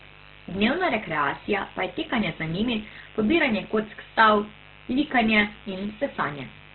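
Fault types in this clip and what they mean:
Mains buzz: a steady, raspy 50 Hz buzz sits under the speech throughout, roughly 25 dB down. Unlike a smooth hum, which is mostly the fundamental, its sharp switching spikes spread harmonics well up into the kilohertz range, giving it a gritty edge.
Opus compression: the speech is muffled, grainy and rough, with nothing above 4.2 kHz. That points to a very low bitrate, around 12 kbps, in Opus's music mode as the likely cause. The roughness is noisy fill rather than MP3-style swirling or warbling holes.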